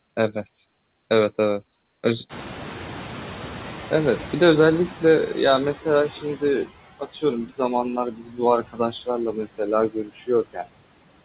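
All the way through there are noise suppressor artifacts: the background is pushed down by about 15 dB frame by frame, so the noise sinks between the words and rises under them.

When the room noise jumps at around two and a half seconds, the noise suppressor is catching up from 2.29 to 6.64 s. The noise comes through with less reduction at first, then sinks by about 12 dB as the estimate adapts.

Later there's speech cut by the noise suppressor at 7.0 to 7.23, 8.11 to 8.39, 8.67 to 9.08, 9.9 to 10.29 and 10.53 to 10.67 s. These are dips of about 11 to 18 dB that leave bits of speech swallowed.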